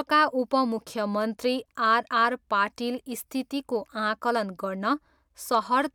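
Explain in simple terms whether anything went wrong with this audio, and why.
Near the end of this speech clip, from about 5.54 to 5.75 seconds, there is hard clipping. For that short stretch the sound was slightly louder than the recording chain could handle, so the tops of the loudest waves were sliced off flat instead of being rounded. Those flattened peaks create extra high-pitched tones that were never in the original sound, heard as a brief crackle or roughness on the loudest moments.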